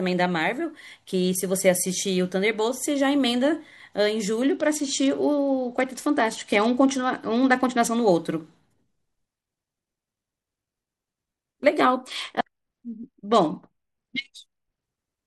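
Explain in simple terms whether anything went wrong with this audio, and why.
Twice the Bluetooth link got congested and the phone fell back to a Bluetooth SBC bit pool drop, squeezing the speech into far fewer bits, from 4.47 to 7.97 s and 11.98 to 14.83 s. The highs thin out, so it sounds dull and muffled, with a gritty hiss until quality returns.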